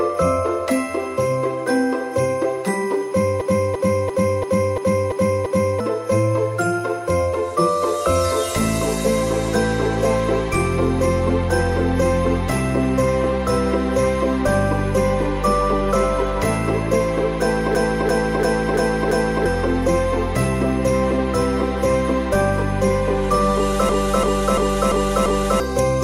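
A system hang loop occurs at 3.41 to 5.80 s, 17.75 to 19.46 s and 23.89 to 25.60 s. Playback froze while a 341 ms buffer, which fits 16384 samples, repeated at 2.93 Hz as a stutter. On the waveform and spectrogram it appears as identical blocks copied side by side.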